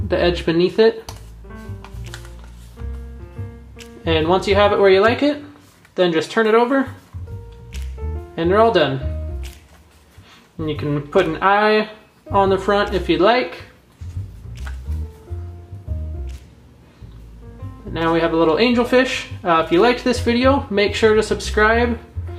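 No technical faults are audible.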